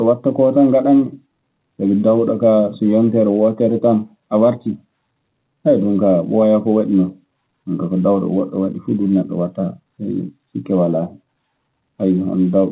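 Nothing goes wrong anywhere in the speech here: it's simply carried over ordinary A-law G.711 telephone coding at 8 kHz, so the top end stops at 4 kHz as that format always does, and there's nothing else to flag.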